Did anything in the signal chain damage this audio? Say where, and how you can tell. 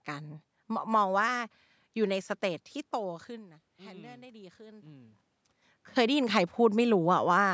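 Yes. Automatic gain rising occurs in call processing, from 3.03 to 5.24 s. Around 3 s the speech input drops by about 21 dB. The gain control then slowly raises its gain by about 5 dB. Speech and room noise swell together.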